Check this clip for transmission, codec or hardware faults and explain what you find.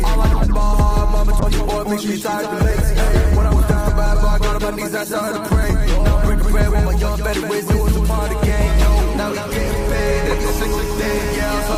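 Two faults are present: a doubled audio track across the whole clip and a call bitrate drop from 1.4 to 7.1 s.

Doubled audio track, throughout: a full-band second copy trails the original by roughly a fifth of a second, sitting a few decibels quieter. The likely cause is the audio being captured twice, once through a slower path, or an edit holding two copies out of step. Because the copy has no decay or room colouring, it sounds like a flat, slap-back repeat rather than a natural echo.

Call bitrate drop, 1.40 to 7.09 s: the call's bandwidth estimate fell, and the encoder was told to spend far fewer bits. The sound fits a fall from about 48 kbps to 17 kbps, staying at the lowest level for about 4.6 s. At that rate Opus codes much more coarsely and trims the high frequencies, so the audio turns rough, watery or muffled until the bitrate recovers around 7.1 s.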